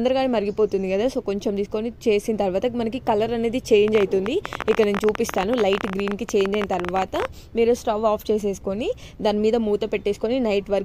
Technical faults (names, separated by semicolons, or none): train of clicks